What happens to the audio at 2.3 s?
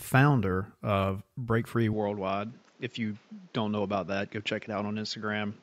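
At 2.3 s the speech is already past an abrupt change at 1.93 s that lasts to the end: the input has likely switched to a poorer device. Nothing reaches above 7.6 kHz, so it sounds duller and boxier, about 5 dB quieter, with a new background noise well beneath, and no gap at the switch.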